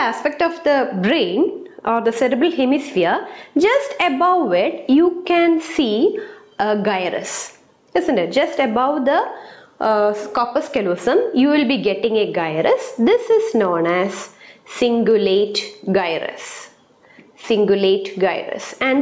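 The whole clip has gain pumping: the gain keeps swinging by something like 15 dB, so the audio ends up squashed. That's likely from input gain set way too high, with a fast limiter clamping down on every peak. It's gone through call microphone processing too, with nothing above 8 kHz.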